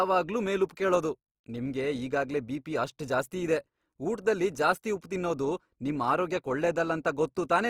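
Throughout, the speech sounds grainy and rough, yet still reaches 20.4 kHz. This is likely Opus compression in music mode, fitting roughly 24 kbps.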